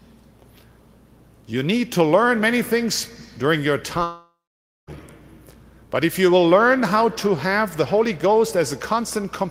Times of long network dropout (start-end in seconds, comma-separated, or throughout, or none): 4.03-4.90